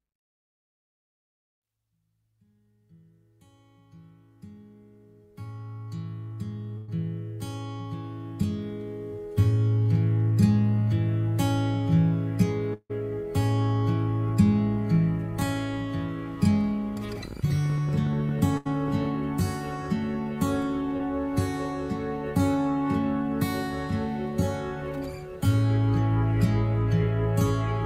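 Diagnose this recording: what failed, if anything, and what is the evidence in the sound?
Burst of packet loss, network stage. At 6.77–6.90 s and 18.57–18.67 s, the last sound is held and fades. About 100 ms and 80 ms go missing.

Long network dropout at 12.74–12.91 s. The sound is continued, fades, then about 50 ms of silence follows. Roughly 160 ms is lost, likely in the network.

Train of clicks from 16.97 to 19.16 s. About 30 irregular clicks, near 14 per second, peak roughly level with the sound. The likely cause is interference in the analogue wiring or interface.

Short concealed packet loss at 20.97–21.01 s, in the network. About 20 ms never arrived. The receiver filled it with a brief smear before blending back.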